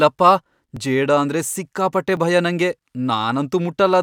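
At 0.77 s, just before "ಜೇಡ ಅಂದ್ರೆ ಸಿಕ್ಕಾಪಟ್ಟೆ ಭಯ", and again at 2.17 s, between "ಜೇಡ ಅಂದ್ರೆ ಸಿಕ್ಕಾಪಟ್ಟೆ" and "ಭಯ ನಂಗೆ", the speech gives a tiny, hard-edged click. Each is a repeated buffer: fresh audio arrived late, so the device played its last block once more, and a 5 ms slice is heard twice in a row. That length fits a 5 ms buffer, and because the repeat is added rather than replacing anything, essentially no audio goes missing.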